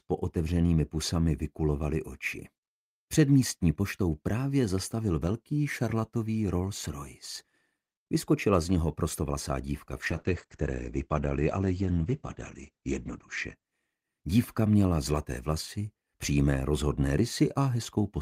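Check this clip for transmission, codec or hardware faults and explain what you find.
A call bitrate drop occurs from 10.03 s to 13.61 s. The call's bandwidth estimate fell, so the encoder was told to spend far fewer bits per second, a reduction consistent with a fall from around 40 kbps to around 14 kbps. It held that low rate for about 3.4 s. The coarser coding makes the sound rough and watery, and the audio bandwidth narrows from 20 kHz to 8 kHz, dulling the top end until the bitrate recovers near 13.6 s.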